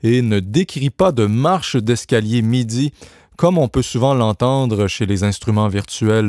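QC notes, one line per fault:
throughout: resampler restarted on every block. Every 10 ms block is converted in isolation during a 48 kHz to 24 kHz halving, so each edge carries a small error. The result is a 100 Hz buzz present only under signal. A spectrogram shows faint vertical lines every 10 ms, and the waveform shows tiny steps at each block boundary.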